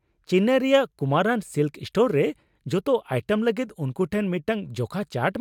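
Nothing in the speech stood out as a technical problem on listening.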